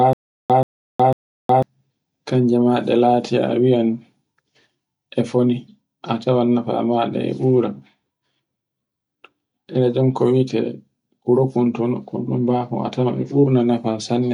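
Speech whose first 1.63 s is a stutter with silent gaps: a 132 ms burst repeats three times, separated by about 365 ms of dead silence, likely from a stalled stream replaying its last fragment.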